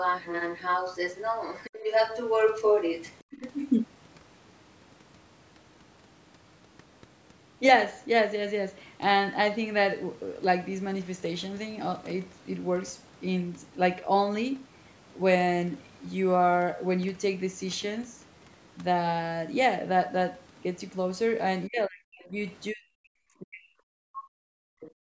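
From 0 to 3.15 s a second voice runs underneath at roughly the same loudness as the main speech, then returns faintly, well below it, from 3.31 to 3.52 s. This is the other side's voice leaking through, likely loudspeaker echo the canceller missed. A spectrogram shows two overlapping sets of harmonic stripes.

Near the end, at 21.67 to 22.37 s, 22.72 to 23.76 s and 24.04 s to the end, the speech drops sharply, almost to silence at its deepest. This is likely speech suppressed in double talk, with the canceller ducking everything while both sides spoke. The waveform's envelope caves in, and the spectrogram shows dark gaps.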